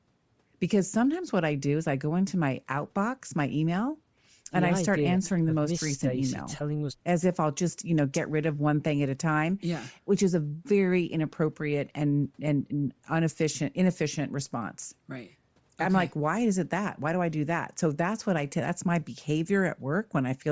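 Throughout the speech, the upper band sounds breathy and grainy, with fine high-frequency detail replaced by noise-like fill. This is likely Bluetooth LC3 compression. The damage fits a low bitrate, around 32 kbps with 7.5 ms frames, where the codec discards upper spectral content and substitutes noise.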